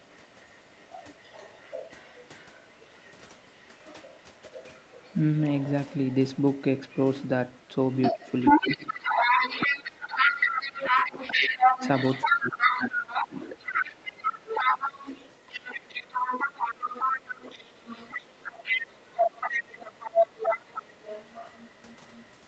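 From 0 to 5.69 s a faint second voice sits well beneath the speech. From 6.05 s to the end it is roughly as loud as the talker. This is the other side's voice leaking through, likely left behind by incomplete echo cancellation. On a spectrogram it shows as a second, overlapping set of harmonics.

Speech suppressed in double talk follows at 8.12 to 11.19, 11.54 to 11.81, 12.26 to 13.34, 14.13 to 14.67, 20.17 to 20.29 and 20.82 to 20.87 s. The canceller likely ducked both voices, so the talker dips or drops out. The waveform envelope sags by up to about 15 dB there.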